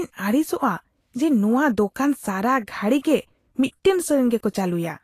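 From start to finish the speech sounds hissy and grainy, with roughened tones, smeared consonant attacks and nothing above 14.2 kHz. This is likely Vorbis compression at a low setting, around 35 kbps, where coarsely quantised treble turns fine detail into noise.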